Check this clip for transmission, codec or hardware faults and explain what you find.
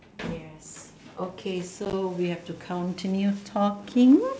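One fault is present: packet loss on the ADPCM call between 1.85 and 1.94 s. About 30 ms of audio drops out in short bursts no longer than 10 ms each, spread across that stretch, which fits roughly three small packets going missing. Each gap is filled with silence, leaving hard-edged holes. Because the decoder's adaptive predictor and step size lose track of the sender's, the speech comes back after each hole slightly distorted, then settles within a few tens of milliseconds. The underlying G.722 wideband coding carries speech up to 7 kHz with faint upper-band hiss at most, which points to the full 64 kbit/s mode.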